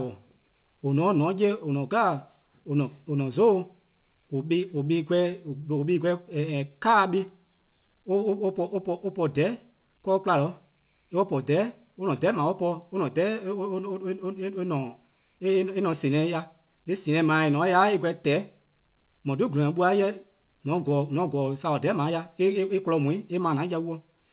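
From 4.78 to 6.36 s, scattered short gaps: about ten lost packets, each patched by extending the previous sound. You hear small ticks or smears, and the waveform shows brief repeated cycles.

From 6.50 to 7.88 s, a jitter buffer slow-down adds 115 ms by repeating pitch periods. Speech runs at 92% speed with unchanged pitch, and the spectrogram shows stretched harmonics.

From 9.86 to 11.03 s, a jitter buffer speed-up removes roughly a tenth of a second of pitch periods. Speech plays at 108% speed and sounds hurried, and the spectrogram shows compressed syllables. Throughout, nothing appears above 4 kHz, which fits a G.711 A-law call path.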